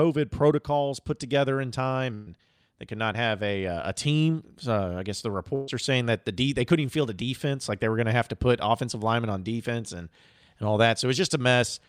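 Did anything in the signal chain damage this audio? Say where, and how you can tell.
Yes. A burst of packet loss on the network hits at 2.14–2.28 s and 5.55–5.68 s. Each gap is filled with a decaying continuation of the last sound, never silence, and about 0.12 s and 0.13 s respectively are then skipped.

A short concealed packet loss, also network-side, makes a brief smear at 3.13–3.15 s. It is only about 10 ms missing, blended back in rather than held and faded like the bursts.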